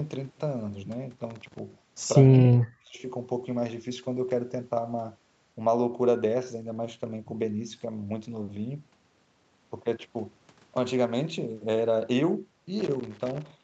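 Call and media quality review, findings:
Loose connector crackle, 1.30–1.59 s and 12.79–13.51 s: irregular bursts of scratching. Probable component is a worn or dirty contact, rapidly making and breaking and chopping the signal, with any DC offset turning each break into a pop.

Speech suppressed in double talk, 2.29–3.02 s: the speech dips for about 0.7 s, with the deepest dips around 40 dB down. Likely cause is the echo canceller failing to separate the near-end talker from the overlapping far-end echo and attenuating the near-end talker along with it.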